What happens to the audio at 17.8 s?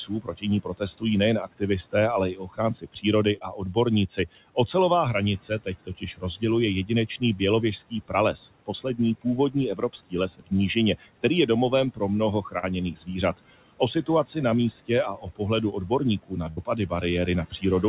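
At 17.8 s the speech is still inside a stretch of speech cut by the noise suppressor, running from 11.95 s, right after "je domovem", to the clip's end. The suppressor mistook speech for noise, pulling it down by up to about 17 dB, so consonants and endings sound swallowed. On the waveform the envelope shrinks, and on the spectrogram the speech harmonics fade into the floor. The same moment carries noise suppressor artifacts: background noise is cut by about 18 dB frame by frame, so it sinks between the words and rises under them.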